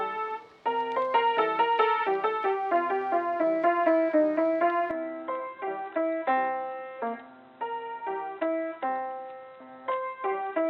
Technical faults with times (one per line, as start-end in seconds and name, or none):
4.91-10.70 input switched to a poorer device